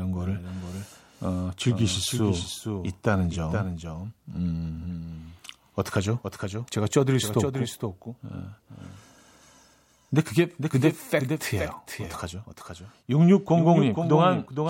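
Speech with a doubled audio track running the whole way through: a second, full-band copy trails the original by about half a second, roughly 5 dB quieter, with no decay or room colour. Likely cause: a slower capture path recording the same signal twice.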